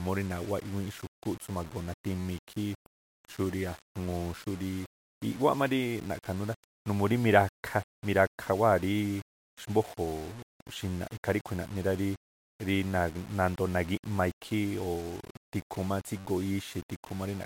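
Throughout the speech, grainy distortion tracks the signal about 20 dB down, likely low bit depth without dither, fitting 7-bit rounding with no dither.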